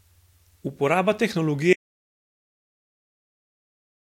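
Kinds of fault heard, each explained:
Audio dropout to silence: the input was likely lost while zeros kept being written, so speech cuts off at 1.73 s into total silence until the end.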